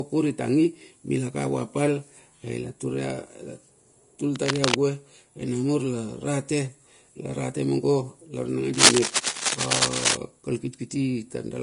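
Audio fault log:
throughout: Vorbis compression. The codec damage is plainly audible across the whole clip. The treble stops dead at 10.6 kHz, and what sits below that edge has a hissy, grainy texture, with the speech sounding roughened and its onsets smeared. That's what you get when the upper detail is quantised so coarsely that it turns into noise-like filler, and the overall character fits a low rate somewhere around 36 kbps. The likely cause is a low-quality Vorbis encode.
4.35–4.76 s and 8.74–10.16 s: cable scratch noise. Dense, uneven scratching and rustling lands on top of the speech in both spots. The first burst is short and sits at roughly the same level as the speech. The second runs about 1.4 s and comes in louder than the speech. It sounds like a contact whose resistance is jumping around as something moves, likely a worn cable, connector or control carrying DC.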